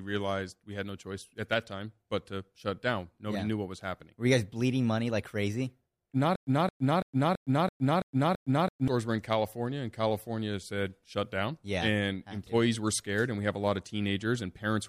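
From 6.36 to 8.88 s there's a stutter with silent gaps: a 220 ms fragment repeats seven times with 110 ms silences, likely a stalled stream, before "were in".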